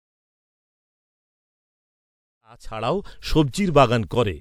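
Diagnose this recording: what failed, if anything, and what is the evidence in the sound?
Nothing in this speech recording points to a failure at any stage; the one change in level is a smooth fade in, starting around two and a half seconds and reaching full level at 3.3 s with no click or hard edge, just as an editor would shape it.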